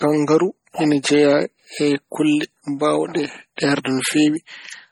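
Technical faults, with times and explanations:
Throughout: MP3 compression, likely the cause of the heavy damage heard across the speech. Nothing is left above 20.8 kHz, and the watery, swirly texture and smeared attacks fit a low bitrate near 32 kbps, where weak frequency lines drop in and out between frames.
3.56–3.58 s: pre-echo, right after "e kulle mbaawɗe". A short hiss lasting about 20 ms comes before a sharp attack, which sounds softened. The codec spreads the quantisation noise sized for the loud onset across its whole block, including the quiet moment before it.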